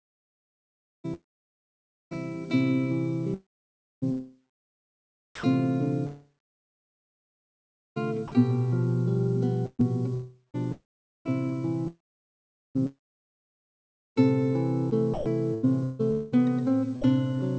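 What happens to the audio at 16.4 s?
At 16.4 s the sound is choppy. Pieces of it drop out and are replaced by a synthetic hiss. The cause is likely sound chopped by the voice detector. The sender's detector keeps switching transmission on and off and fills each gap with comfort noise. This stretch runs from 9.66 s to 17.07 s, with a second from 16.11 s to 17.04 s. About 3.7 s of sound is lost in all.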